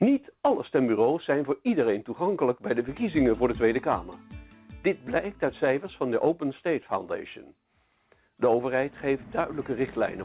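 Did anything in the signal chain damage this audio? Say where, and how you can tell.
No, nothing in the signal chain damaged this audio.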